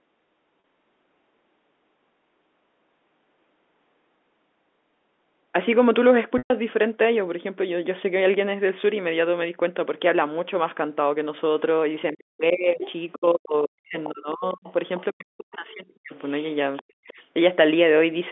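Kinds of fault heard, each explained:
Packet loss with pitch repetition: Audio went missing in two places, for 40 ms at 0.60 s and for 120 ms from 6.38 s, which fits runs of 20 ms packets. The receiver filled each gap by repeating the last pitch period. The short gap comes out as a briefly held, buzzy tone. The longer one fades into silence after about 50 ms, and the signal comes back through a short cross-fade.
Speech suppressed in double talk: From 12.13 to 16.13 s, and again from 16.87 to 17.2 s, the talker's level dips hard, by roughly 40 dB at its deepest. In the first span about three seconds are affected, in broken pieces. The likely cause is the echo canceller failing to separate the near talker from loudspeaker echo while both sides were active, and turning everything down.
Other side's voice leaking through: A second, quieter voice appears at 12.8–13.15 s, 14.04–14.09 s, 14.67–15.04 s and 16.26–17.13 s. 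It sits roughly 10 dB below the talker in the first burst and about 20 to 25 dB below in the later ones, overlapping the suppressed stretches. This is likely far-end audio from the loudspeaker that the echo canceller did not fully remove from the microphone signal.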